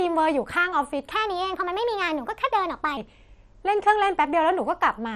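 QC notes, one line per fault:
Throughout: MP2 compression damage. The speech is dull and carries a gurgling, granular roughness as the upper sub-bands drop in and out and the remaining bands are quantised coarsely. This is likely MPEG Layer II encoding starved of bits, so whole high-frequency bands are switched off frame by frame. The heaviness of the damage points to a low bitrate, around 56 kbps.
1.11–2.97 s: section at the wrong speed. This stretch plays 1.22 times faster than the surrounding audio, so the speech sounds hurried and raised in pitch by about three semitones, with speed and pitch shifting together. Normal speed returns abruptly at each edge. The likely cause is that the segment was played or rendered against the wrong clock rate, for example a sample-rate mismatch in an edit or playback step.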